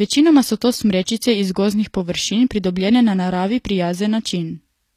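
Throughout the speech, the treble sounds synthetic, with nothing above 14.9 kHz. S sounds turn gritty and lispy. This is likely HE-AAC compression: upper bands are copied from lower ones rather than coded. The plainly audible damage fits a bitrate near 24 kbps.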